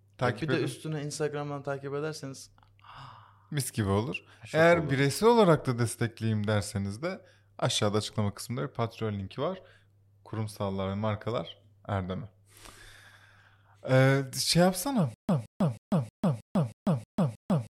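From 15.14 s to the end of the speech, the audio falls into a stutter with silent gaps. A fragment of about 169 ms plays, then about 147 ms of dead digital silence follows, and the cycle returns every 316 ms, eight times in all. Likely the player stalled and replayed its last buffered piece at each retry. Unlike simple dropouts, the same fragment repeats, and the gaps, absent in a seamless loop, mean the following audio never plays.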